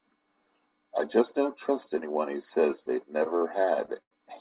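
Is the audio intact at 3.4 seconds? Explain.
No, not quite. A short stall from a late packet runs from 3.38 to 3.43 s. The jitter buffer ran dry, so the last sound was stretched for about 35 ms until the packet arrived. Unlike a lost packet, nothing is skipped. The speech resumes where it left off, just 35 ms later, with one sound held slightly too long.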